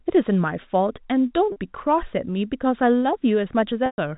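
At 1.52 s there's a brief packet loss with pitch repetition. About 40 ms of audio drops out, which fits two 20 ms packets, and the receiver loops the last pitch period to cover it, so you hear a quick held, slightly buzzy note. A longer gap comes at 3.86 s, about 120 ms. The repeated cycle fades to silence before the speech cross-fades back in. Underneath it all, the G.711 telephone band limit above 4 kHz is audible.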